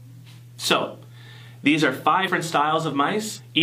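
Compressed frames are skipped at 2.23 to 2.28 s and again at 3.35 to 3.41 s. Each time, whole frames of the encoded stream never reach playback, either missing from the file or rejected by the decoder as damaged. The sound leaps forward by about a fifth of a second, a span made up of complete frames.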